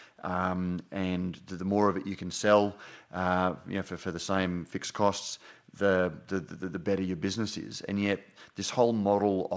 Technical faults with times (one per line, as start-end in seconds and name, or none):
none